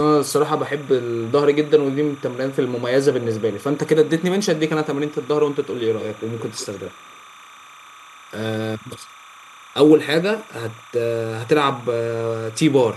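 Timecode bleed runs through the whole clip, a steady chirping warble around 1 and 2 kHz sitting roughly 25 dB under the speech. Linear timecode from a nearby track or cable has leaked in, and its pulse rhythm fits 30-frame code.

From 5.97 to 7.23 s, a faint delayed copy of the speech trails the original by 154 ms, around 20 dB down. This echo leak is likely a far-end loudspeaker's output that its echo canceller failed to fully remove before sending it back.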